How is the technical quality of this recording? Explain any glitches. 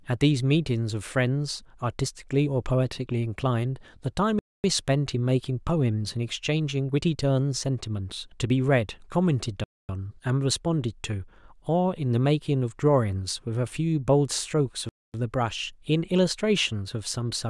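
The speech is broken by three hard-edged silences. Gap between chunks at 4.39–4.64, 9.64–9.89 and 14.89–15.14 s: 250 ms holes after each 5 s chunk, where silence is left at the chunk joins. Unlike dropouts, the speech resumes exactly where it stopped.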